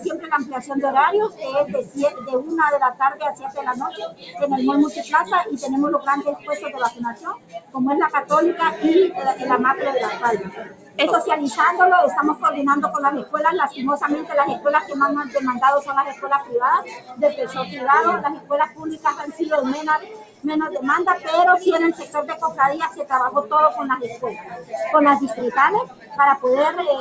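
From the start, a noise suppressor built for speech is working on material it was not designed for, treating sustained content and ambience as noise. Its gain swings by around 15 dB, so held sound and decaying tails are pulled down while sharp onsets mostly pass. The result is a pumping, unsteady level and a thinned-out body. The band also stops at 8 kHz, which fits a G.722 wideband call codec.

The sound cut by the noise suppressor shows up as distinct dips. The first runs from 0.0 to 7.75 s, where roughly 3 s in total is pushed down by up to about 14 dB. A short dip follows at 10.48 to 10.99 s, about half a second deep at about 14 dB. The longest stretch runs from 12.35 to 23.07 s, with again roughly 3 s attenuated by up to about 14 dB. Brief dips then come at 24.1 to 24.73 s (about 13 dB) and at 25.85 to 26.18 s (about 14 dB). In each, the sustained parts sag or have their decay clipped short, heard as level holes and truncated tails.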